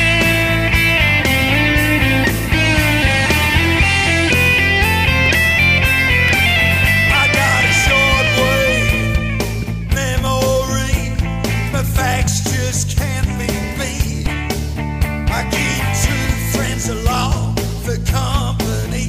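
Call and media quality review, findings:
Short skips at 6.28, 8.27, 10.26, 12.27, 14.26 and 16.25 s. Overlap between stream segments: about 2.0 s spacing fits 2 s segment boundaries. Overlapping timestamps make the player trim roughly 12 to 19 ms of audio that wasn't duplicated, so the waveform jumps at each join. Probable component: segmenter/packager timestamping or player splice logic.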